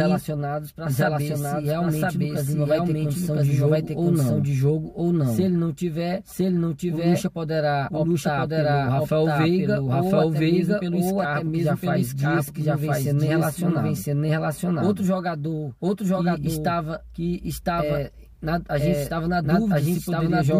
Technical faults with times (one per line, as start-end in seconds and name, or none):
0.00-20.60 doubled audio track